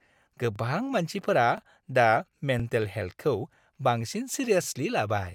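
At 0.56–0.58, 1.58–1.60, 2.60–2.62, 3.62–3.64 and 4.64–4.66 s there are overlapping chunks: each 1-second chunk starts 20 ms early, so that sliver plays twice, giving a little stutter right before "मानसिफोरा दा" and again just after it.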